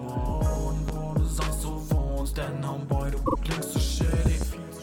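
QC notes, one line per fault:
0.88 to 0.92 s, loud pop: a single sharp pop jumps out about 10 dB above the surrounding sound, which carries on underneath. It's most likely a voltage spike from a switch, plug or static getting into the signal path, with the downstream circuitry shaping it into that short hard hit.
4.26 to 4.45 s, loud pop: two pops this time, again peaking about 10 dB over the sound, spread across roughly a fifth of a second. The likely cause is the same kind of electrical transient, here arriving twice in quick succession.
3.25 to 3.35 s, repeated frames: a 48 ms chunk of audio plays two extra times, so you hear a brief stutter. That points to a two-frame run of compressed data being written or sent more than once, and the decoder faithfully playing it again. The clip ends up 96 ms longer than it should be.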